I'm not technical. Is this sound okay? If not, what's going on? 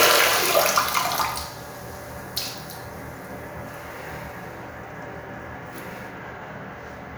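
Yes, this sound is fine; nothing here is wrong.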